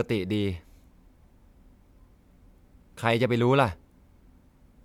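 Nothing goes wrong in this bit of speech; there's not a single technical fault to point to anywhere in it.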